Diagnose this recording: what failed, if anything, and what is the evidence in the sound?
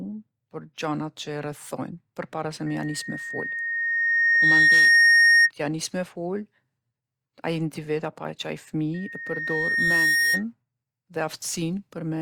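Loudspeaker feedback squeal, in the analogue acoustic loop. A 1.9 kHz tone swells over the speech at 2.66–5.51 s and 8.94–10.44 s, reaching roughly 15 and 10 dB above it. The spectrogram shows one bright horizontal line, and the waveform envelope balloons. The microphone hears its loudspeaker with loop gain above one.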